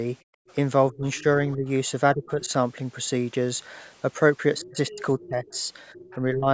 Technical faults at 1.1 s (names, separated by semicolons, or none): other side's voice leaking through; speech suppressed in double talk